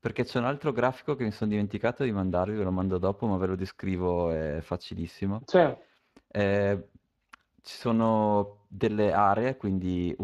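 Speex codec damage runs through the whole speech clip and is plainly audible. The CELP coder has few bits for the excitation, which fits a bitrate around 22 kbps, so speech sounds noisy and hoarse. Above 8 kHz only shaped, noise-like fill remains, and nothing reaches beyond 15.3 kHz.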